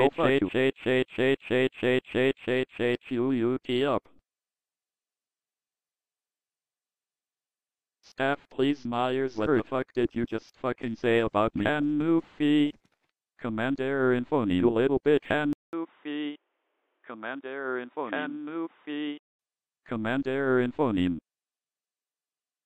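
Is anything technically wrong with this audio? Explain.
Yes. From 15.53 s to 19.39 s the sound turns dull and boxy, then clears again. This is most likely the input switched to a poorer device partway through the recording. A 200 ms silence marks the switch. The replacement path passes nothing above 3.8 kHz, so the upper band disappears. Its gain is different, and the level falls by roughly 10 dB. It also brings its own faint background noise, far below the signal.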